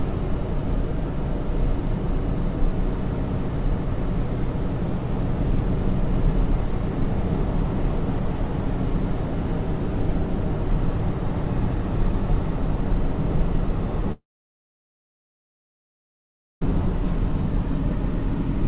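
At 14.12 s the sound breaks off: the last moment trails into a brief fading buzz, then about 2.4 s of near silence until the audio resumes at 16.63 s, with roughly 2.5 s never heard. This is likely a long network dropout, with the receiver stretching the last sound before giving up. The waveform shows a short decaying tail and then a flat line. On the spectrogram, whose energy stops at 4 kHz as the G.711 call path imposes, the gap is an empty column.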